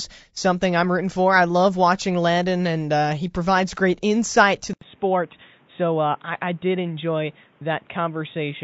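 A speech recording with two problems stacked on top of each other. All the way through it has the rough, grainy texture of low-delay AAC compression, likely AAC-ELD of the kind video calls use. The short frames don't resolve the pitch harmonics well, so noise fills the gaps between them and the top end sounds thin and a bit synthetic. The damage is plainly audible and fits a bitrate around 32 kbps. Then at 4.73 s the sound drops out for about 80 ms and comes back duller and boxier, which is the input switched to a poorer device, likely a headset's call profile or a cheaper microphone taking over. From there to the end, nothing above 3.8 kHz gets through, the level sits a few dB lower, and there's a new noise floor underneath, roughly 35 dB below the speech.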